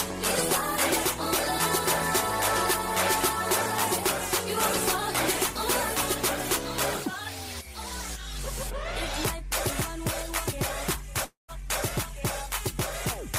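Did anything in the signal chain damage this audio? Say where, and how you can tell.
Yes, and it's late in the clip. From about 11.24 s to 11.51 s the audio cuts out: the last sound smears on as a fading buzz, then there's roughly 130 ms of near-silence before it picks up again, with about 240 ms of material simply gone. That points to the network stage, likely a long network dropout, where nothing arrived and the receiver's concealment stretched the last frame until it gave up, then resumed past the gap.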